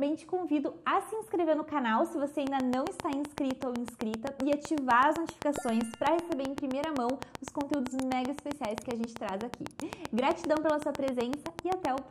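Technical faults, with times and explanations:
2.47 to 11.99 s, train of clicks: from about 2.5 s a steady ticking rides over the sound right through to almost the end, roughly 7.8 clicks a second at an even spacing, some seventy in all. Each one has much the same sharp shape and sits about 15 dB above the audio, so they cut through clearly and keep going in the quieter gaps too. That regular, identical pulsing points to something outside the audio injecting it, likely interference from nearby gear or a faulty connection or power supply.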